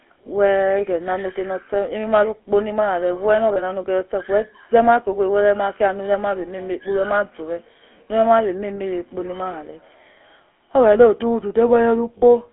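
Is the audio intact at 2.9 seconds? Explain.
No. At 2.9 seconds the speech has a buzzy, gravelly roughness and a narrow, boxed-in tone, and this runs through the whole clip. It is plainly audible GSM full-rate codec damage. The signal sits in a telephone band of roughly 250 Hz to 3.4 kHz, so there is no bass and no upper treble. The codec models the vocal tract and drives it with a coarse, regularly spaced pulse excitation. That crude excitation causes the grit, and the sound fits the 13 kbps full-rate GSM codec.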